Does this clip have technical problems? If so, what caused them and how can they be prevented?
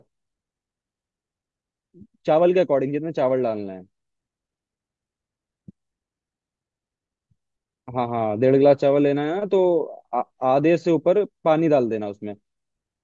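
No, there are no technical faults to report in this speech clip, so nothing needs preventing.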